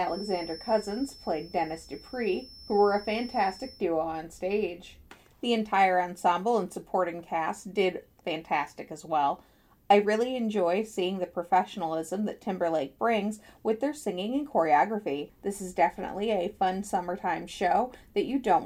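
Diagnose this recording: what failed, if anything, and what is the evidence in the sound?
The likely failure is an acoustic loop between loudspeaker and microphone in the capture path, with the gain sitting just at the edge of feedback so that one frequency recirculates without building into a howl. The result is a feedback whistle, a thin, steady tone near 5.3 kHz from the very start until about 3.87 s. It rides roughly 20 dB below the sound and swells and fades slowly in level, then disappears.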